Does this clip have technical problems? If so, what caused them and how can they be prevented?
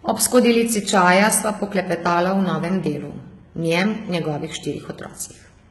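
Yes. Throughout the speech the s sounds come out gritty and lispy, with a metallic, artificial sheen in the treble, and nothing reaches above 11.8 kHz. This is likely HE-AAC compression, heavily applied at a very low bitrate, around 16 kbps. The codec keeps only the lower spectrum and rebuilds the highs by copying lower bands upward under a coarse envelope, so the synthetic treble's harmonics don't match the real ones below the crossover. To prevent it, encode with plain AAC or another codec at a higher bitrate such as 64 kbps or more for speech.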